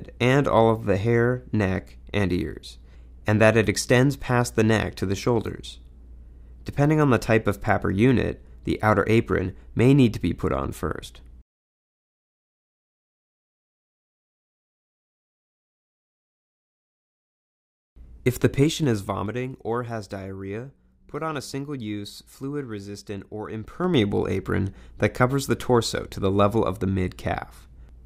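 From 18.53 to 19.41 s and 23.59 to 24.01 s, zipper noise: the level moves in audible 3 dB steps, each ticking.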